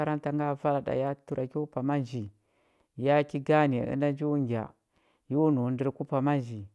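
No technical faults can be heard anywhere in this recording; the signal holds steady from the first moment to the last.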